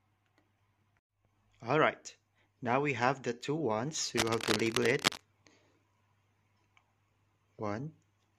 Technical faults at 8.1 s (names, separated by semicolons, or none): none